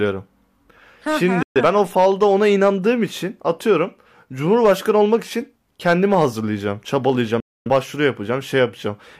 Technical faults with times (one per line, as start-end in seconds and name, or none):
1.43-1.61 digital broadcast dropout
7.40-7.70 digital broadcast dropout